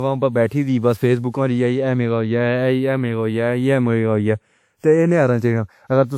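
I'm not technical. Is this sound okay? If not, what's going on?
No, it isn't quite right. Two problems run through the whole clip.

First, channels drifting apart: the left and right sides were captured on devices whose clocks disagree very slightly, so by the end one side lags by a fraction of a millisecond. Played together in mono, that creeping offset gives the speech a slow, whooshing flanging effect.

Second, generation loss: the speech sounds swirly, smeared and a bit hollow, with the starts of sounds blurred and nothing in the very top treble. That's likely from being saved in an older WMA format around five times over, each save adding more damage.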